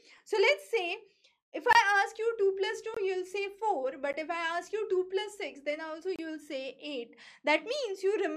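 Blocks of digital silence fall at 1.73 to 1.75 s, 2.94 to 2.97 s, 4.13 s and 6.16 to 6.19 s. Each time, the audio drops straight to silence and returns with no fade. The first two gaps last about 21 ms each, which fits a 1024-sample output buffer that wasn't filled in time, and they come across as short pops. The 12 ms gap at 4.13 s is a tick, and the 28 ms gap is a brief hole.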